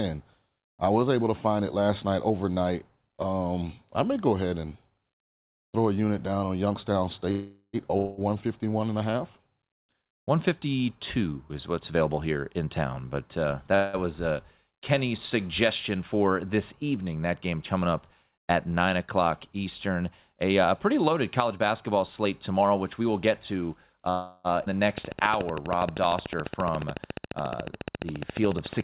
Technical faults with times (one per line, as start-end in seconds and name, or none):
7.31-7.76 call audio freeze
7.97-8.20 long network dropout
11.91-13.48 jitter buffer speed-up
13.75-13.96 call audio freeze
21.11-24.07 jitter buffer speed-up
24.10-24.47 call audio freeze
24.65-24.69 skip ahead
24.98-28.84 train of clicks
25.31-26.09 jitter buffer slow-down